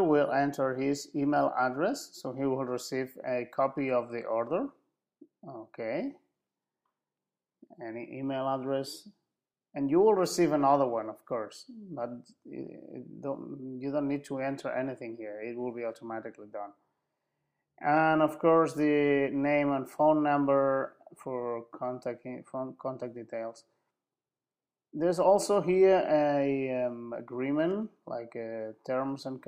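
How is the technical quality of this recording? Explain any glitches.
The technical quality of this recording is sound, with no glitches to explain.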